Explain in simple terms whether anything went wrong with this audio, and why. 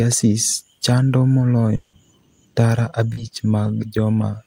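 Long network dropout, from 1.75 to 1.95 s: about 180 ms of speech is missing, and the receiver fills the whole gap by stretching out the last sound into a fading buzz rather than going quiet. The likely cause is audio that never arrived over the network.

Short concealed packet loss, from 3.13 to 3.19 s: about 40 ms of speech did not reach the decoder in time, so the receiver patched the hole by extending the previous sound, then blended back, leaving a brief smear.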